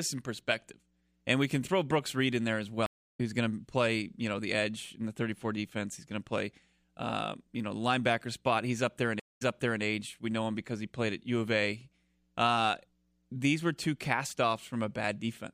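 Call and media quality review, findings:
Stream reconnect, 2.86–3.21 s: speech cuts after "in there as", about 0.33 s of silence, resumes at "who's going" roughly 0.4 s further on. Connection dropped, player reconnected and restarted its decoder at the live point, skipping audio.

Stream reconnect, 9.20–9.82 s: dropout after "up there in", 0.21 s silence, then playback resumes 0.42 s earlier, repeating material. Server resent a buffered burst on reconnect; fresh decoder started mid-stream.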